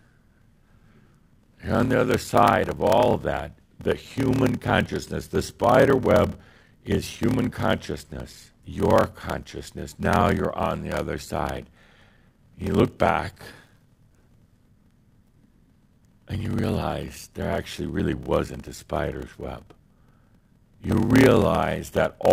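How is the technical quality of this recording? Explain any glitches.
The recording has two clear technical faults: a steady buzz with slowed-down speech throughout, and one loud pop near the end.

Block size mismatch (padded), throughout: one stage hands over shorter blocks than the next reads, which fits 1024-sample blocks read as 1152, so each block ends in silence. Those regular gaps make a buzz at about 38.3 Hz, and the speech runs at 0.889 times normal speed while keeping its timbre.

Loud pop, from 20.91 to 20.94 s, just before "realize that all the": a sudden voltage spike, likely from static, a switch or a driver glitch, was added to the signal. It is heard as one sharp pop, peaking around 10 dB above the speech, which continues underneath.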